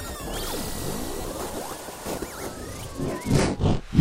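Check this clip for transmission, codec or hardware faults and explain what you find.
One transmission fault is present. From 1.21 to 1.24 s, a 30 ms stretch of the sound turns into a brief noisy smear, its tonal detail briefly replaced by a grainy wash. These are lost LE Audio frames, consistent with about three 10 ms frames dropping out. The LC3 decoder covered the gap by repeating the last received spectrum with randomised signs, which keeps the overall level but scrambles the fine structure.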